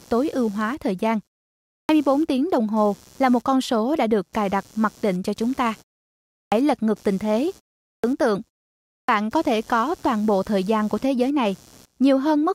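Speech clip with two problems. Running underneath the whole thing is computer activity noise, a buzzy, chirping texture pulsing at around 150 Hz and sitting roughly 30 dB below the speech. It comes from processor or graphics load shifting the shared ground of the audio circuit, so it follows the machine, not the talker. The second problem is a clipped start after a pause, heard four times. The output device drops into sleep during silences of about half a second to 0.7 s, and it takes roughly 50 to 60 ms to wake up again, so the opening sounds get chopped off. You'll hear it at 1.84 s before "tiếng đồng hồ là", at 6.46 s before "lật ngược tình thế", at 7.98 s, and at 9.03 s before "có thể có toàn". Each time the speech snaps in abruptly out of silence.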